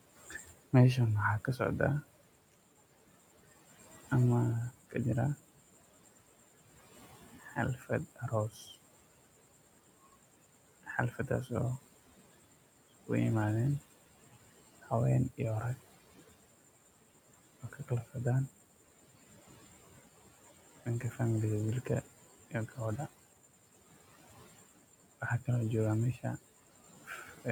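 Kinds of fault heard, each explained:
Noise suppressor artifacts: the suppressor treats the room noise, which sits about 18 dB below the speech, as a steady floor and pulls it down by about 18 dB frame by frame across the whole clip. The background drops away in pauses and climbs back under speech. Unlike speech cut by the suppressor, the damage lies in the texture of the leftover noise, not in missing speech.
Speech cut by the noise suppressor: in seven stretches, from 0.11 s to 27.46 s, the suppressor mistakes parts of the speech for noise and turns them down by about 15 to 18 dB. Soft consonants and word endings sound swallowed. The worst spans are 4.71 to 13.1 s, with around three seconds affected, and 13.79 to 21.19 s, with around two. Here the speech itself goes faint, rather than the background merely fluttering.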